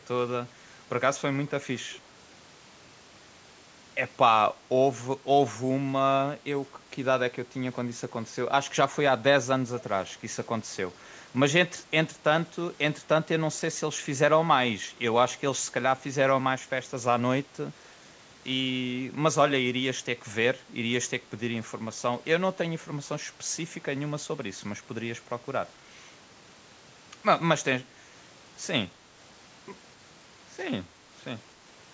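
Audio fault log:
1.93 to 1.99 s, echo leak: a very faint, brief delayed copy of the speech turns up about 226 ms after the original, well below the main level. It's likely a loudspeaker on the far end whose echo canceller let a scrap slip back down the line.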